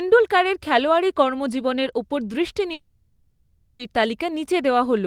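From 2.73 to 3.81 s the speech gives way to a fading buzz and then about 10 ms of silence, likely a long network dropout. The missing second never returns, so unlike a brief packet loss the speech resumes further on instead of stalling.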